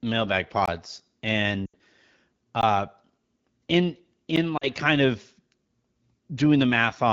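At 0.66 to 0.68 s there's a block of digital silence: the speech drops straight out for about 21 ms, which fits a 1024-sample buffer that wasn't filled in time. The sound cuts out and back with no fade, so it comes across as a short hole.

At 1.66 to 1.75 s you get lost AMR speech frames. For about 80 ms, which points to four dropped frames, the AMR-WB decoder keeps repeating the last good pitch and vocal tract settings while the gain falls. The sound smears and sags, and the voice comes back weak or rough for a moment.

At 2.61 to 2.63 s there's another block of digital silence, 16 ms of silence cut in and out with no fade. It's just long enough to register as a short hole.

At 4.36 s a 10.67 ms dropout, which fits a 512-sample buffer, gives a single sharp click.

At 4.57 to 4.69 s there are more lost frames. This concealed stretch is about 40 ms, which fits two missing frames, and the sound drops toward near silence before the speech recovers.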